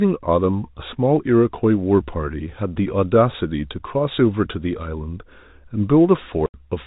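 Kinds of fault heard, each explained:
Packet loss filled with silence, 6.46 to 6.54 s: the speech cuts out abruptly for 80 ms near the end and returns just as sharply, with hard edges on both sides of the gap. The receiver had nothing to play there and inserted silence instead of concealing the gap. Its length fits four consecutive 20 ms packets going missing. Around the hole, the narrowband telephone sound of the G.711 coding continues.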